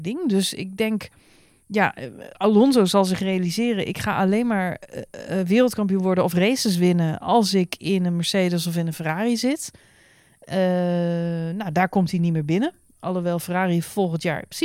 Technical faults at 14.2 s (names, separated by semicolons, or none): none